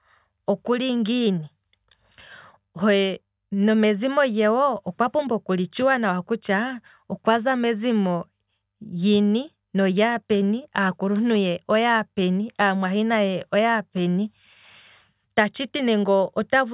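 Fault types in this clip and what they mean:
No technical faults are audible anywhere in this speech recording.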